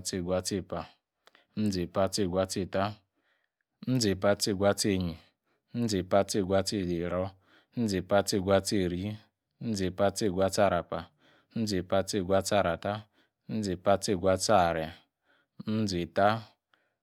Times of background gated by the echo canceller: none

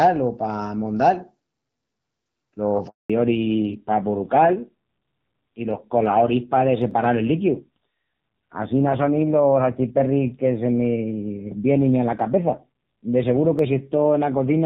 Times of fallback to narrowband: 3.10-14.66

